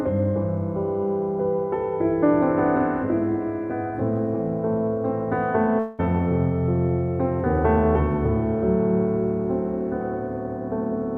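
From 5.79 to 6.14 s the sound turns into a fading buzz, then resumes with about 0.2 s missing. Likely cause: a long network dropout.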